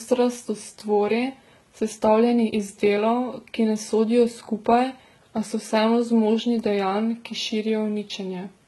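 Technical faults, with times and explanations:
Throughout, transcoding between lossy codecs: the speech was likely squeezed through a low-bitrate codec, fitting HE-AAC near 16 kbit/s, then re-encoded, fitting Vorbis near 43 kbit/s. The first pass's smeared, synthetic highs stay, the second adds its own swirl, and nothing remains above 11.8 kHz.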